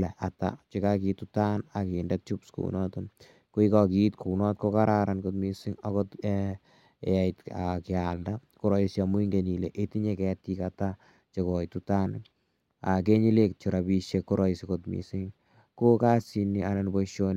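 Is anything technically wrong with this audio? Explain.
Yes. Sample clock jitter runs throughout: timing errors of around 2 µs add a hiss about 45 dB below the speech, louder on sibilants and loud syllables, gone in pauses.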